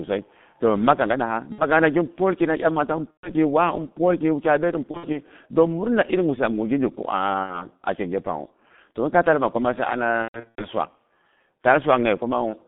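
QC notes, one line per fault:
throughout G.723.1 codec: the speech went through a low-rate telephony coder with 30 ms frames, consistent with about 6.3 kbit/s, and a 150 Hz to 3.6 kHz line band, so it is heavily muffled and hoarse, with smeared consonants from the slowly updated voice model.
1.52–1.64, 3.11–3.33, 4.91–5.18, 7.43–7.66, 10.22–10.66 VoIP packet loss concealed by the speech codec: frames dropped and the decoder stretched its last pitch and filter with falling gain. Each gap becomes a fading buzz or coloured noise and leaves weak, distorted speech after it. The gaps are 60 ms at 1.52 and 7.43, and 120 ms at 3.11, just after "imata an". At 4.91, just after "ɓyet an", 120 ms is scattered over 240 ms, with runs up to 60 ms. At 10.22, 240 ms is scattered over 360 ms, with runs up to 120 ms.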